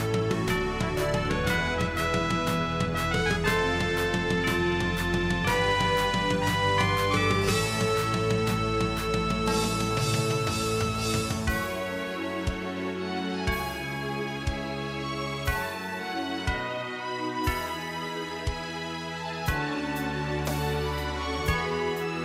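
No technical fault can be heard anywhere in the audio, which stays continuous and steady throughout.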